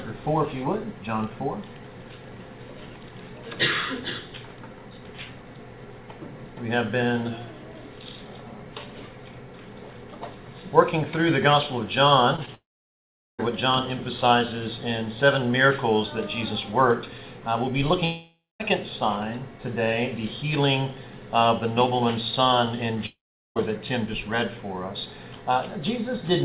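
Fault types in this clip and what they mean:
USB whine: A steady whine at 1 kHz, strongest at 2 kHz and about 40 dB below the signal, through the first 8.6 s, from USB bus frames leaking into the supply.
Short concealed packet loss: Two brief smears of about 20 ms each, at 12.36 s and 12.46 s, where the receiver stretched the previous sound over packets that arrived too late.
Long network dropout: At 12.55 s, 18.05 s and 23.06 s, a fading buzz collapses into silence for 0.23 to 0.78 s, then sound resumes with a gap, likely from network dropouts.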